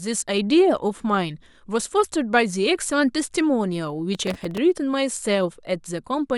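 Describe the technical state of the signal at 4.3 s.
At 4.3 s the speech carries processor overload crackle, from 4.15 to 4.58 s. Buffers of a few milliseconds repeatedly miss their deadline and replay stale audio with hard edges, giving gritty tearing. Unlike a single dropout, it is a dense burst of many tiny glitches.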